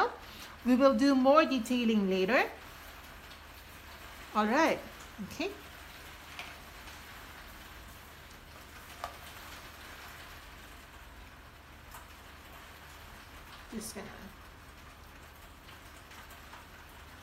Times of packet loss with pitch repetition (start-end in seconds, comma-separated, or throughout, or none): none